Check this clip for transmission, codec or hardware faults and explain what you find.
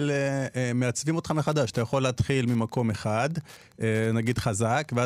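One fault is present: Wi-Fi interference from 1.36 s to the end. A nearby radio's beacons, every 102.4 ms, are rectified by the audio circuit, producing faint ticking about ten times a second, roughly 30 dB below the speech. On a spectrogram it shows as evenly spaced broadband vertical lines, and on the waveform as small regular spikes.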